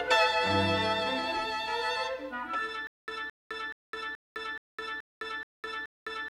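From 2.87 s to the end, a stutter with silent gaps: a 218 ms burst repeats eight times, each followed by 208 ms of digital silence, likely a stalled stream replaying its last fragment. The true silence between repeats sets it apart from a seamless loop.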